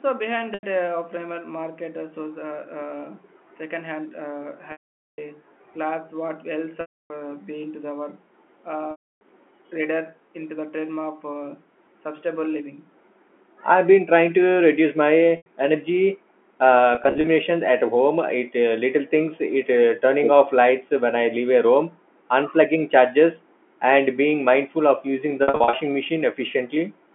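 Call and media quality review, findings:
Held buzzy tones and fades to silence at 0.54, 4.72, 6.81, 8.91, 15.37, 16.95 and 25.43 s, up to 460 ms. Packet loss with pitch repetition: concealment repeats the last pitch period, then fades.

Delayed copy of the talker at 20.22 s, about 5 dB below, 359 ms late. Likely echo leak from far-end loudspeaker past its echo canceller.

Talker dips briefly at 21.02 s, around 30 dB, and 22.15 s, around 15 dB. Likely speech suppressed in double talk: echo canceller attenuating during overlap.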